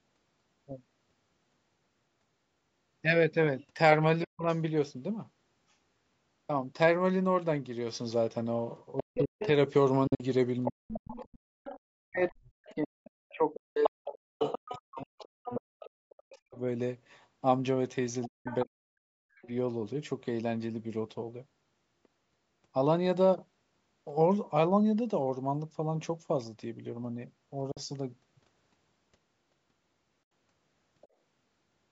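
A speech recording with a call microphone path, band-limited to nothing above 8 kHz, shows four kinds of fault. Speech suppressed in double talk occurs at 4.25 to 4.47 s, across 9.03 to 16.58 s, and at 18.26 to 19.48 s. In each span the talker's level dips by as much as roughly 40 dB. In the long middle span about four seconds in total are affected, and in the later one about a second. The likely cause is an echo canceller that could not tell the near talker from loudspeaker echo while both sides spoke, so it attenuated everything. The other side's voice leaking through appears in the same regions. It is a faint scrap at 4.54 to 4.58 s, around 40 dB below the talker. A sustained stretch runs from 8.97 to 16.38 s at roughly 10 dB below. Another stretch runs from 18.45 to 19.48 s at roughly 15 dB below, and a faint fragment sits at 31.01 to 31.08 s. This is likely residual far-end audio from the loudspeaker that the canceller failed to remove from the microphone signal. 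Bluetooth dropouts cut holes at 10.07 to 10.23 s, 27.72 to 27.80 s and 30.23 to 30.32 s, each followed by the sound resuming as if it had played on. The first removes about 91 ms scattered over about 122 ms, with the longest gap about 46 ms. The second removes about 46 ms and the third about 76 ms. The likely cause is audio packets arriving too late for the headphones and being discarded. Background gated by the echo canceller shows at 11.38 to 11.60 s, where the room sound drops by about 40 dB for roughly 200 ms and then returns. During that moment the canceller clamped the microphone hard while loudspeaker audio was playing.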